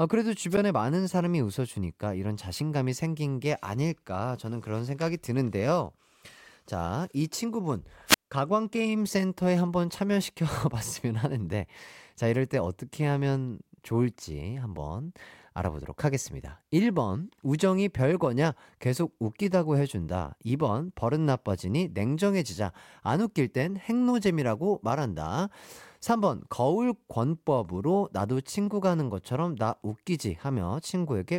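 A speech recording suffers wireless microphone squelch dropout twice: the FM radio link fades, hiss swells, and the receiver's squelch mutes the output, leaving near silence. At 0.50 to 0.58 s the mute lasts about 9 ms; at 8.07 to 8.31 s, about 175 ms.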